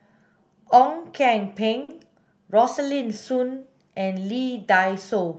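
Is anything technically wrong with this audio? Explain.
Yes, there is one brief fault in this speech clip. From 1.83 to 1.90 s there is a short stall from a late packet. A packet arrived late, the jitter buffer ran dry, and the receiver stretched the last sound by about 50 ms until the data turned up, then resumed from the same point. Nothing is lost, but the delay grows by 50 ms. The sound holds unnaturally, with a slight buzz or dip. On a spectrogram the harmonics run flat and repeated, and the waveform shows a repeating cycle.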